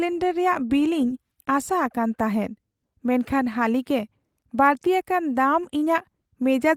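A speech recording with no technical faults detected.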